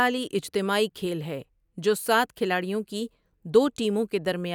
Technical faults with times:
0.88-3.46 sample clock jitter

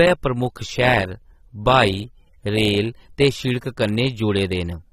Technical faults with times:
0.00-4.92 AAC compression

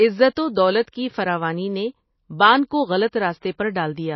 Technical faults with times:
0.00-4.15 MP3 compression
0.35 pre-echo
0.82-0.93 pre-echo
3.11 pre-echo

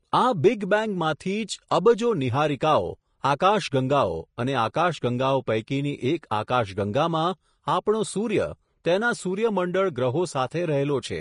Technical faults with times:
0.00-11.21 Vorbis compression
1.70 pre-echo
3.39 pre-echo
6.30-6.48 pre-echo
8.84 pre-echo

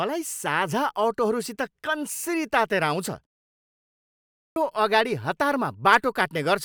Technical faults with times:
3.95-4.56 clipped start after a pause

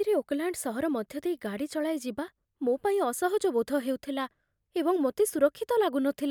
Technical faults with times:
none

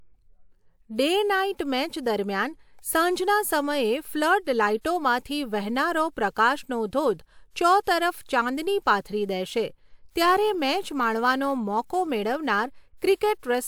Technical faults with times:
9.41-13.67 block size mismatch (truncated)

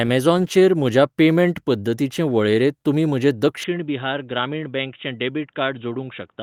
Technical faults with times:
3.64-6.43 input switched to a poorer device

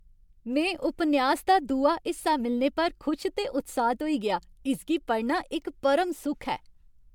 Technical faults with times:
0.00-7.15 generation loss

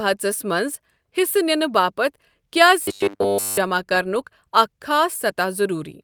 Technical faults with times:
2.82-3.57 robotic sound from repeated short buffers

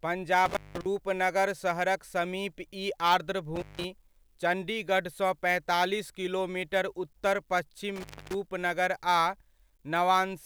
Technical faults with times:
0.46-0.86 intermittent contact
3.56-3.85 intermittent contact
7.96-8.34 intermittent contact

